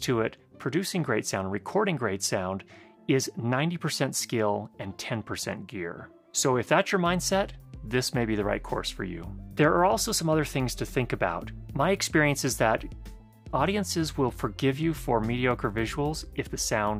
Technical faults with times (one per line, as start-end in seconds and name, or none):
none